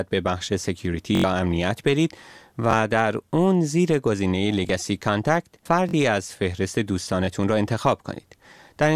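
Repeated buffer at 1.15–1.24 s (four extra plays), 2.71–2.73 s, 4.67–4.69 s, 5.89–5.93 s (two extra) and 7.25–7.28 s. Audio arrived late, so a 21 ms chunk replayed, which fits a 1024-sample buffer. Each sounds like a brief stutter, and the waveform shows identical copied segments joined by hard vertical seams.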